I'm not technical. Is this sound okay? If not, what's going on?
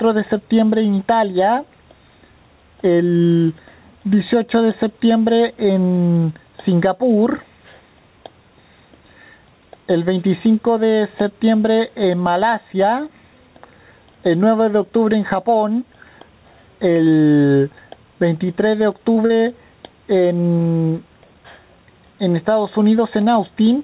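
No. Gain pumping runs through the whole clip. The level swells and sinks on its own. The likely cause is the microphone level set far too high, with an automatic limiter repeatedly pulling it back down. Loud and soft parts end up squashed closer together.

Short concealed packet loss occurs three times in quick succession: at 19.14 to 19.18, 19.26 to 19.31 and 19.37 to 19.41 seconds. Each time, a few hundredths of a second of audio failed to arrive over the call. The receiving end patched each gap by stretching the sound just before it, then blended back in. You hear this as a brief smear or wobble, and a short sound can disappear.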